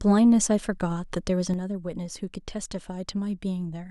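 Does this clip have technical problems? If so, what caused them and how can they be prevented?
Yes. At 1.54 s the speech suddenly drops by about 6 dB and stays at that lower level until the clip ends at 3.91 s. This is a sudden gain jump, likely caused by a digital gain setting or bit shift applied from one sample to the next without a ramp. Unlike a talker turning away or a slow fade, the background noise falls in the same instant and by the same amount. Applying gain changes through a short smoothing ramp of a few milliseconds prevents it.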